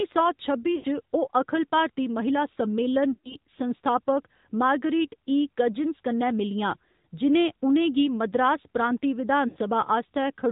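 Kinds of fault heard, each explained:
AMR narrowband mobile codec: The whole speech clip has passed through the 2G/3G mobile speech codec, which rebuilds the voice from a vocal tract model driven by a few pulses rather than storing the waveform. Nothing above 4 kHz survives, and the plainly audible buzzy, synthetic edge fits a mid-rate mode around 10.2 kbps. A plain low-pass filter would dull the sound but keep its natural texture. This has a coded, buzzy character.
lost AMR speech frames: At 0.76, 3.14 and 9.48 s, runs of corrupted frames, about 80, 100 and 80 ms of audio, were concealed by the decoder. It reused the last good pitch and vocal tract settings at falling gain, so each spot smears into a drawn-out, fading warble instead of a click or a hard gap. A plain packet dropout would cut straight to silence. Here the voice stretches and dies away before returning.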